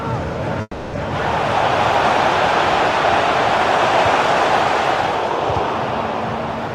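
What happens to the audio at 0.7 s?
At 0.7 s the audio is inside a call audio freeze that runs from 0.61 to 0.95 s. The last sound is stretched into a fading buzz or hiss that ends in about 30 ms of silence, likely because delayed packets left the jitter buffer empty. Unlike a packet-loss dropout, nothing is cut out: the audio resumes exactly where it stalled, now about 320 ms later than before.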